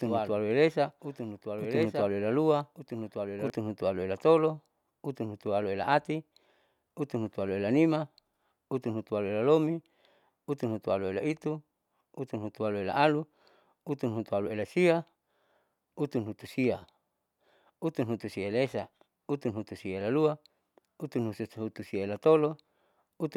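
From the very start until 3.5 s, the speech is shadowed by a second, full-band copy of itself trailing about a second behind and about 5 dB quieter. It has no reverberant tail or room colour, and it cuts off abruptly at 3.5 s. This is a doubled audio track, likely from the same signal being mixed in twice, with one copy arriving late through a slower path or an out-of-step edit.

Within that stretch, at 1.83 s, a single sharp click sounds, and another comes at 13.89 s. Each is a thin vertical line across the spectrum, too brief to take any sound away. These are dropped samples: a tiny fraction of a millisecond is missing from the stream, so the waveform jumps straight to a later value.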